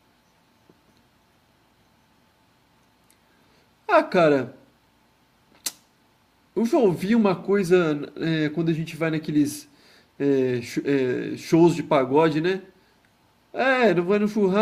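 A speech recording with no technical faults to report. Nothing at any point in the recording calls for a time or a cause.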